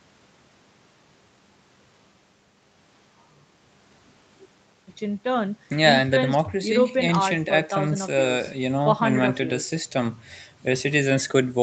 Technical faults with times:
none

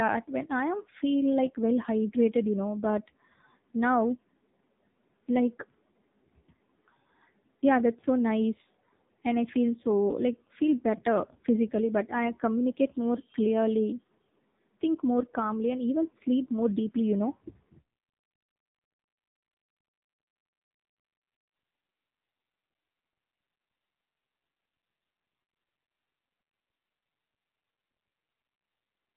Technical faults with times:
0.00-29.16 AMR narrowband mobile codec

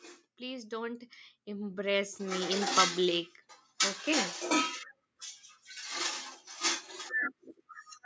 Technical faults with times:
0.37-2.71 automatic gain rising

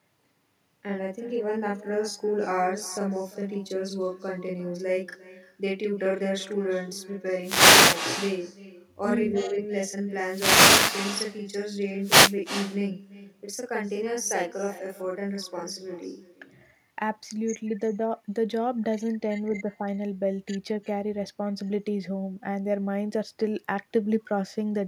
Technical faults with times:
0.00-24.88 channel delay (doubling)
0.00-24.88 echo with no canceller
7.39-8.02 wireless microphone noise hit
10.22-11.05 wireless microphone noise hit
12.00-12.35 wireless microphone noise hit

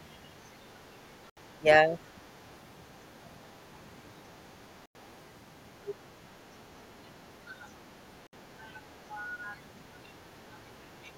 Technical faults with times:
1.30-1.37 Bluetooth stall
1.60-2.20 speech suppressed in double talk
4.86-4.95 Bluetooth stall
5.87-5.94 other side's voice leaking through
8.27-8.33 Bluetooth stall

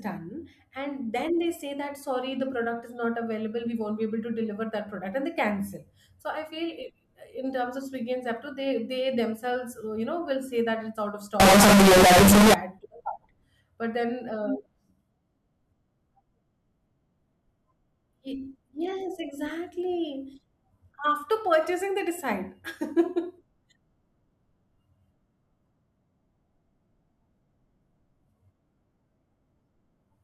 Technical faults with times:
11.40-12.54 float read as integer

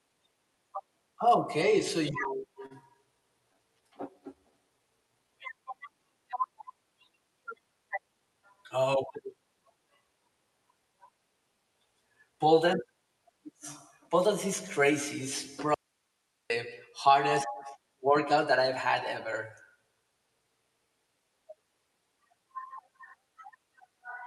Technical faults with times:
2.11-2.72 repeated stalls (stutter)
3.41-5.76 jitter buffer slow-down
7.72-8.43 jitter buffer speed-up
15.74-16.50 audio dropout to a faint residue

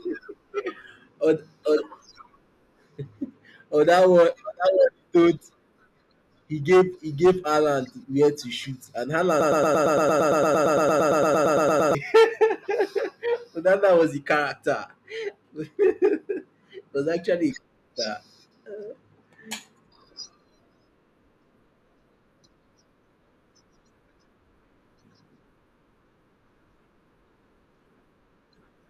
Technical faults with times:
9.41-11.95 broken-record loop

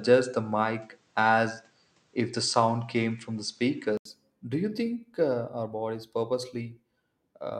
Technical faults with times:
0.00-4.05 input switched to a poorer device

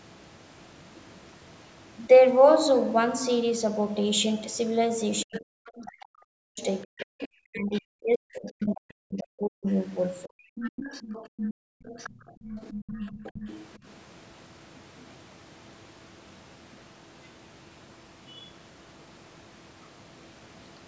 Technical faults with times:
5.24-10.51 speech suppressed in double talk
5.34-8.51 other side's voice leaking through
10.56-13.93 other side's voice leaking through
11.54-12.44 background gated by the echo canceller
15.00-15.06 other side's voice leaking through
18.28-18.49 other side's voice leaking through

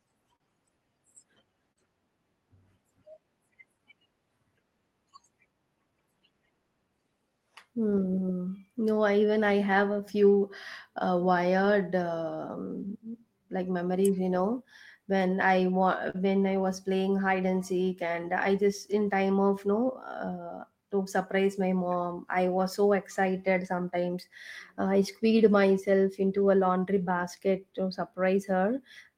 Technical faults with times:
0.00-29.18 clock drift between sender and receiver
0.04-29.18 repeated timing corrections
0.36-3.81 scattered short gaps
9.94-12.02 scattered short gaps
15.42-19.22 scattered short gaps
22.61-26.06 scattered short gaps

